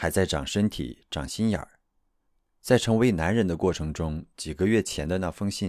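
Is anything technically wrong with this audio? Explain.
No, nothing technically wrong can be heard here.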